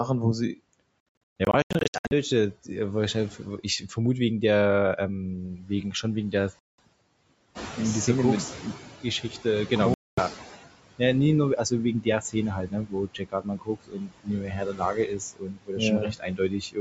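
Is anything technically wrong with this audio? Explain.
Yes. Four kinds of fault can be heard.

Noise suppressor artifacts run through the whole clip. The suppressor lowers each frequency band it judges to be steady noise, frame by frame. Here it cuts the background by about 21 dB. The noise dips between phrases and swells back under the speech.

Bluetooth dropout is the likely cause of three gaps. The first sits between 1.45 and 2.12 s. Short holes are scattered over about 1.1 s, adding up to 661 ms of silence. The longest single hole is 128 ms. Another gap runs from 6.59 to 6.80 s, 192 ms long. The last runs from 9.94 to 10.19 s, about 235 ms. Packets arrived too late and were dropped. The sound stops. It resumes further on, as if it had kept playing.

Speech cut by the noise suppressor happens four times. The suppressor mistook parts of the speech for noise and turned them down with it. 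From 5.56 to 6.05 s the drop is about 10 dB. From 12.02 to 12.35 s it is about 17 dB. From 12.56 to 15.82 s it reaches about 22 dB, touching roughly two seconds of speech. From 15.99 to 16.78 s it is about 21 dB. Endings and soft sounds come out swallowed and faint.

The noise suppressor catching up starts near 7.55 s. The room noise jumps by about 11 dB there. The suppressor's noise estimate lags behind that jump. So the louder noise first comes through with less reduction. The estimate takes about 3 s to adapt. By 10.6 s the noise has sunk again, now cut by about 17 dB. You hear a rush of background that fades away gradually.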